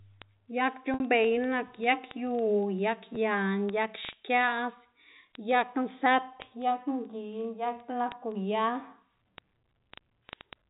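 Word clock ticks run through this speech recording from 0.14 s to 10.69 s, roughly every 40 ms: a receiver on its own unlocked clock, about 500 ppm off, drops or repeats one sample per slip, about 300 ticks in all. Packet loss with pitch repetition follows at 0.94 to 1.00 s, where 60 ms of audio, which fits about three lost packets, is bridged by repeating the last pitch period, fading it out over about 50 ms. All of this sits within telephone-band audio with nothing above 4 kHz, as G.711 A-law coding at 64 kbps delivers.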